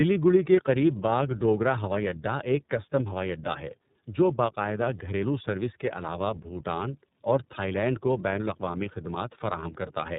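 The speech clip shows tandem speech coding throughout, with nothing above 3.8 kHz. It sounds as though it was squeezed through two low-rate speech codecs in a row, the character fitting iLBC at roughly 15 and 13 kbit/s with an A-law telephone leg between them. Each coder re-encoded the previous one's already damaged output, so the errors compound and the speech comes out rougher, more muffled and more warbly than one pass would leave it.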